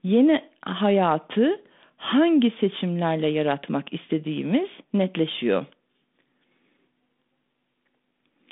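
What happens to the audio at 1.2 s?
Nothing goes wrong at 1.2 s: the speech carries on intact through that moment, still heard through the narrow telephone band of the 32 kbit/s G.726 ADPCM link.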